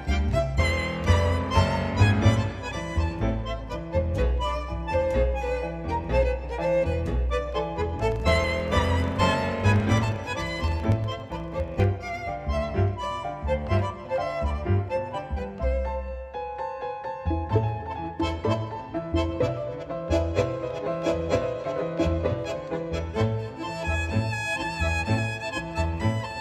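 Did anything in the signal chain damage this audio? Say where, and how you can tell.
Yes: from 8.04 to 11.92 s a 25 Hz buzz tracks the level. A filter restarted on every block in the processing stage resets each 40 ms block, leaving onset ticks.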